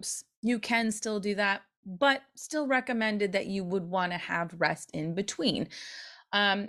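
No technical faults can be heard anywhere in the speech.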